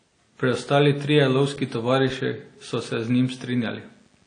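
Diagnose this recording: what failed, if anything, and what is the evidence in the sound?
The codec stage failed: the speech was likely encoded by one lossy codec and then re-encoded by another, a case of transcoding between lossy codecs. The whole clip has nothing above 9.6 kHz, so its top end is dull. Two kinds of coding damage overlap, with artefacts from the first pass carried into a second pass that adds its own. This fits a WMA stream at around 48 kbit/s re-encoded to AAC-LC at about 32 kbit/s.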